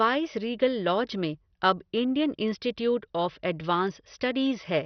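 Throughout the speech, a starved bit budget in what is likely MP2 compression has shut off the upper sub-bands, leaving nothing above 6.1 kHz. The heavy damage, which fits a low rate near 48 kbps, makes it dull and gurgling, with coarse, granular distortion on the remaining bands.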